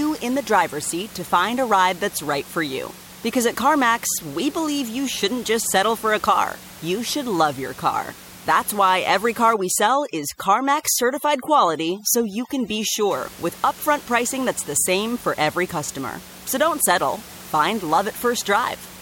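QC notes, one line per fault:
9.54 to 13.11 s, overdone noise removal. After "why every car", the room noise drops and breaks up into twinkling specks. This lasts until "with upfront pricing that's". Too-strong noise reduction is muting bands near its noise estimate, taking quiet speech detail too.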